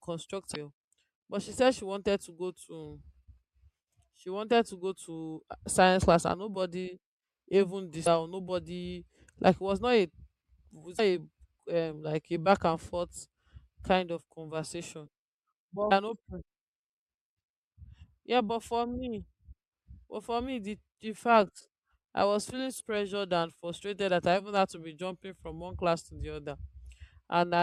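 At 0.52 to 0.57 s, 8.03 to 8.07 s (after "class and nobody even"), 10.96 to 11.00 s, 15.90 s and 22.77 to 22.81 s (after "i was feeling"), this speech has damaged data in a compressed stream. Corrupted bytes make the decoder misread frames and lose sync, giving brief chirps or squawks. A spectrogram shows thin vertical smears of broadband or tonal energy, and the waveform shows short discontinuous bursts.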